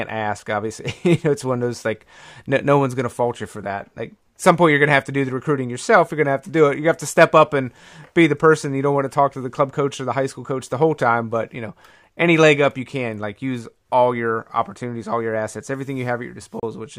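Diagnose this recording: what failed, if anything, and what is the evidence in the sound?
A Bluetooth stall at 16.60 to 16.63 s: the speech drops to silence for about 32 ms, then carries on. This is likely a playback-stage wireless link fault: interference delayed packets, the headphone buffer emptied, and output paused until retransmitted audio arrived.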